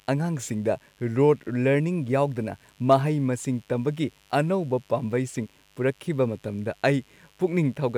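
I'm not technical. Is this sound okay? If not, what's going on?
No, there's a mains buzz running under the speech the whole way through: a quiet, raspy hum from interference at the 50 Hz electricity supply leaking in.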